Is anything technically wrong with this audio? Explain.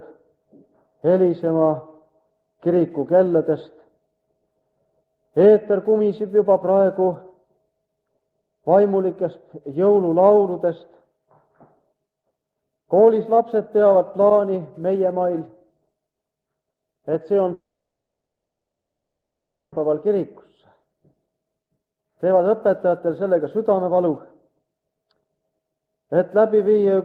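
Yes, there are two faults. From 17.53 to 19.78 s the sound cuts out. A brief fading buzz is followed by about 2.1 s of silence, and about 1.6 s never returns. This is likely a long network dropout. From 21.26 to 25.89 s, a jitter buffer speed-up trims tiny pitch-period slices. The sound plays about 13% fast at unchanged pitch, losing roughly half a second.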